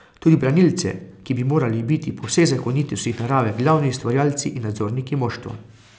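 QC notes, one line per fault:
Throughout, resampler restarted on every block. A tick recurs every 100 ms, a steady 10 Hz pattern heard only while speech is present. Each block was converted separately, likely from 48 kHz down to 16 kHz, so every block edge lacks its real neighbouring samples and leaves a small error.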